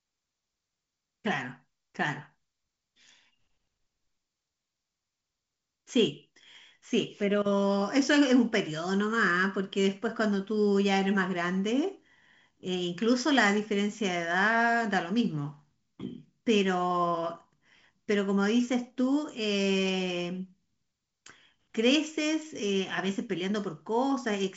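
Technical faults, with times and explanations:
No technical faults heard.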